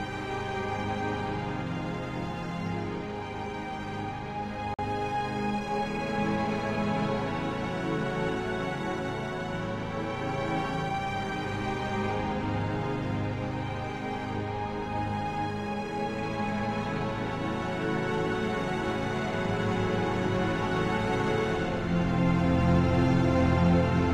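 At 4.74 s there's a corrupt frame muted: the sound cuts out abruptly for about 0.1 s and comes back at 4.84 s. A damaged compressed frame was rejected by the decoder and replaced with silence, and the length of the gap points to a single frame. Timing stays intact, so nothing after it shifts.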